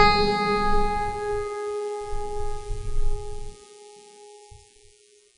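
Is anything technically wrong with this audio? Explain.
Yes. WMA compression, throughout: likely a transform codec near 32 kbps zeroing weak components, leaving the music with nothing above 10.1 kHz and a washy, ringing hiss.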